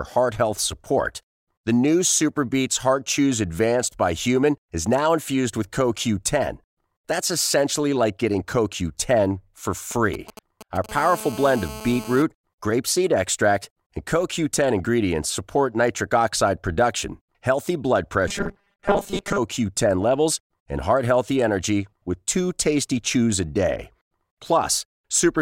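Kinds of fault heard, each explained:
GSM signalling bursts: A nearby 2G handset sending short groups of radio bursts, rectified by the audio circuit. From 9.91 to 10.86 s a galloping run of brief 217 Hz buzzes sits roughly 15 dB below the speech.
GSM phone buzz: A nearby 2G handset now transmitting continuously at 217 bursts per second, with the radio pulses demodulated into the audio path. From 10.89 to 12.22 s a steady, raspy 217 Hz buzz with dense harmonics runs about 15 dB below the speech.
Robotic sound from repeated short buffers: From 18.28 to 19.38 s the speech turns into a rigid, metallic 200 Hz buzz that still loosely tracks the words. This likely comes from audio arriving too seldom, so a 5 ms fragment is looped while most of the real audio is skipped.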